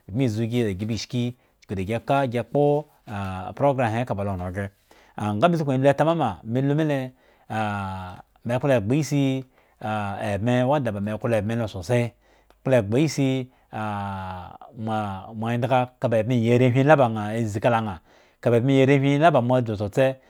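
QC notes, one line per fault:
No faults heard.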